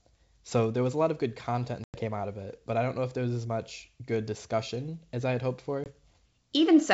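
Packet loss on an ADPCM call at 1.84 to 1.99 s, after "lot of good content", and 5.84 to 5.89 s, after "as I had hoped": 100 ms (around five packets) and 20 ms of sound drop to silence, then return distorted while the decoder's predictor and step size resynchronise.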